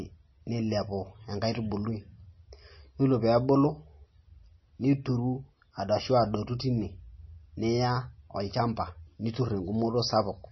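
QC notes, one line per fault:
Throughout, MP3 compression, likely: everything above about 5.9 kHz is simply gone, so the speech sounds dull, and what's left has that watery, swirling quality where quiet detail flickers in and out. That's the encoder running short of bits, chopping the top end at a fixed point and dropping weaker frequency bands frame by frame. The damage is heavy and fits a very low bitrate, something like 24 kbps.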